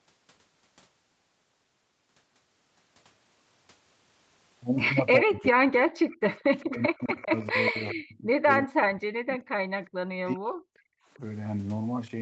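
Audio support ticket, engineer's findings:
Speech ducks and drops out in chunks, up to about 40 dB down, at 5.21–5.74, 6.7–9.53 and 10.19–11.21 s. Likely speech suppressed in double talk: the echo canceller turned the near talker down while the far side spoke.

Faint delayed repeat of the voice, 400 ms behind, at 5.42–5.48, 6.1–7.52 and 7.89–7.93 s (about 20 dB under speech) and 9.85–9.89 and 11.14–11.19 s (about 35 dB under). Echo leak, likely a loudspeaker endpoint whose canceller let residual echo through.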